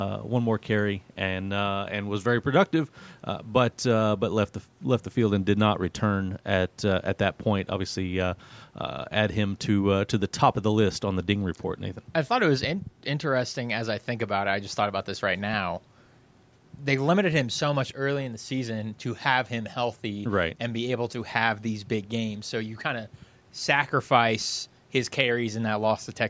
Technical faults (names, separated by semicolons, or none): none